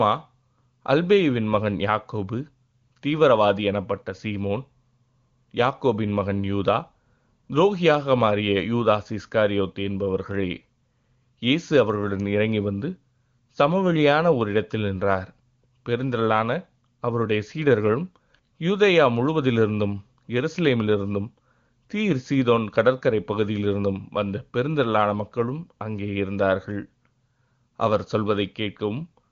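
No faults heard: the speech comes through an AMR wideband (HD Voice) path with nothing above 7.3 kHz, and its clarity fits the codec's top 23.85 kbit/s mode.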